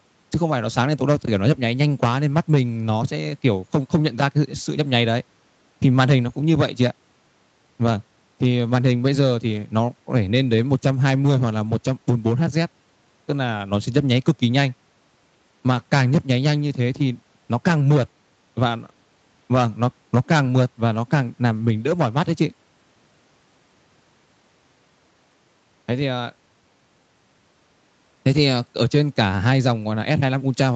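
No faults are audible in this speech; the band tops out around 8 kHz, which fits an Opus call path running at 32 kbps.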